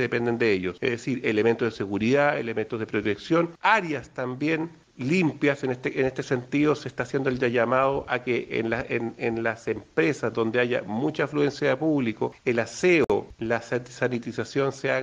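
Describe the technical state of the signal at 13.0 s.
At 13.04 s the file hits a gap at a join of encoded pieces. Two separately encoded segments were spliced together without trimming the encoder's start-up delay and the padding on the final frame, so that dead air stayed in the stream. The result is a silence of about 55 ms, from 13.04 to 13.10 s, cut into continuous sound. Its edges are smeared by the codec, and the sound resumes exactly where it broke off.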